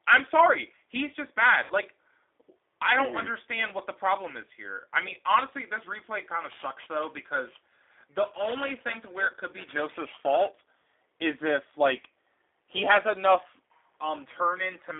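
Speech that sounds thin, slightly rough and synthetic throughout, confined to a telephone band of roughly 300 Hz to 3.6 kHz with nothing above, is the mark of the G.729 codec. The plainly audible coarseness suggests the 8 kbit/s G.729A variant, which rebuilds each 10 ms frame from a vocal tract filter, a pitch predictor and a few pulses rather than the original waveform. From 1.64 to 1.74 s the sound is stretched and fades, and stays weak briefly afterwards. This is VoIP packet loss concealed by the speech codec: about 60 ms of audio, consistent with two lost packets, was guessed from the last pitch and filter with falling gain. The concealed frames then left the decoder's state off for a short while. From 6.45 to 10.61 s a metallic, rough edge rides on the sound and disappears in pauses. That is periodic clock jitter at around 2 kHz, which modulates the converter's timing and adds sidebands at that spacing around every component, most strongly around the higher frequencies.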